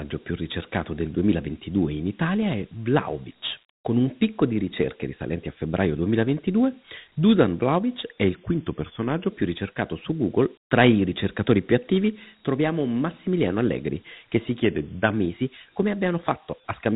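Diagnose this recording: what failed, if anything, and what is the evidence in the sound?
The codec stage shows Dialogic VOX ADPCM throughout: plainly audible grit and hiss trailing the speech, and nothing above 3.9 kHz, which fits 8 kHz sampling at a 32 kbps rate. The coarse 4-bit step adaptation lags the signal and leaves that granular noise.

At the buffer stage, the speech slows by 5.88% and drops 105 cents, about a semitone, from 8.35 to 9.29 s and again from 14.63 to 15.14 s, then snaps back. This is likely a drift correction step, with clock-matching software changing the playback rate in one jump to rebalance its buffer.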